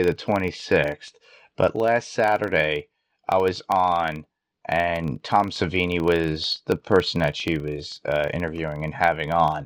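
Speech carries a 25 Hz buzz throughout that tracks its loudness, because a filter restarted on every block resets every 40 ms, leaving evenly spaced spikes on the waveform and vertical stripes on the spectrogram.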